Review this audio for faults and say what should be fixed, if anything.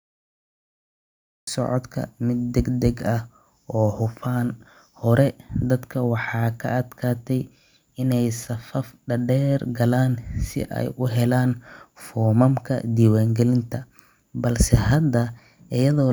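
Cut-off start: capture began late, so the first 1.47 s is digital silence and the speech enters abruptly mid-sound at 1.47 s, without natural attack. Arm the recorder with pre-roll before the talker begins.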